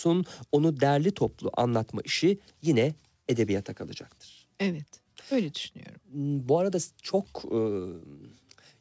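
No technical faults can be heard anywhere in the clip.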